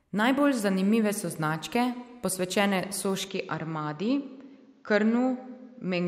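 Speech: from 3.28 s, after "zanimive so značke posvečene", the sound dulls abruptly with nothing above 7.6 kHz and about 5 dB less level, likely an input switched to a poorer device.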